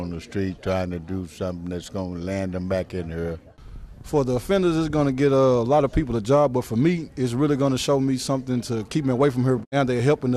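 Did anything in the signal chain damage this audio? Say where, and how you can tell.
Yes, DAB burbling at the broadcast reception and codec stage. Short noise blips appear at 0.72 to 0.74 s, 3.26 to 3.44 s and 9.29 to 9.39 s. Weak reception let bit errors slip past error correction, so corrupted MP2 data put short blips of noise into single sub-bands.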